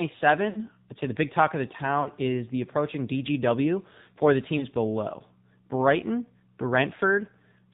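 Throughout, the speech carries AMR narrowband mobile codec damage. Nothing above 4 kHz survives. Voices sound buzzy and synthetic, which fits a low AMR-NB mode near 7.4 kbps. Few bits remain to rebuild the vocal tract and pulse excitation.

Lost AMR speech frames strike three times: 0.50 to 0.59 s, 2.02 to 2.10 s, and 4.58 to 4.65 s. The gaps suggest roughly three, two, then one 20 ms frame. The decoder repeats its last pitch and tract settings at falling gain. The first gives a smeared fade, the last a brief dip.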